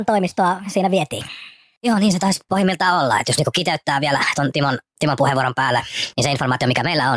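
From start to finish, the speech runs 1.38 times too fast and sits 5.55 semitones high. This wrong sample rate fits 16 kHz audio played back at 22 kHz. Unlike a pitch shift or time-stretch, tempo and pitch rise together, so voices sound squeaky and hurried.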